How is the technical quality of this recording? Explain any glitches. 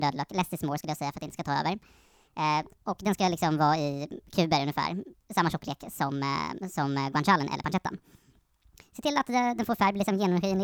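The recording has one clear fault, and it affects the whole clip. Throughout, the speech has a wrong sample rate. It runs 1.5 times too fast, and its pitch sits about 7 semitones high. That fits audio recorded at 32 kHz but played at 48 kHz without conversion. Speed and pitch rise together, so voices sound chipmunk-like and hurried.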